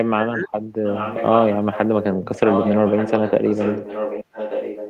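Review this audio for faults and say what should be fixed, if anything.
Speech suppressed in double talk, from 0.12 to 0.5 s, was likely caused by the echo canceller mistaking simultaneous talk on both ends for loudspeaker echo and turning everything down. For roughly 0.4 s the speech dips by up to about 35 dB. A double-talk detector tuned to hold the near talker's level while the far end speaks would prevent it.

Echo leak happens when the loudspeaker end's echo canceller lets part of its microphone pickup through, which is likely here. A copy of the speech returns 1.18 s late: about 10 dB below the speech from 0.84 to 1.56 s, short scraps at about 15 dB below at 1.72–1.78 and 2.01–2.06 s, then a nearly continuous echo only about 5 dB down from 2.24 s to the end. Fixing the far end's echo cancellation, or having that side use a headset, would stop it.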